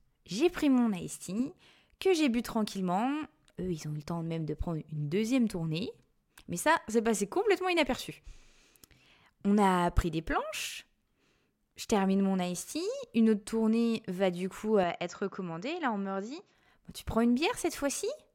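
At 14.84 s, just after "tournée va du coup", the recording likely switched its input to a poorer device, and it stays on that device until 16.55 s. The narrower path passes nothing above 7.6 kHz, so the speech abruptly loses its airy top end and turns dull. It also drops by roughly 5 dB and picks up a faint new background noise far beneath the speech. There is no gap at the changeover.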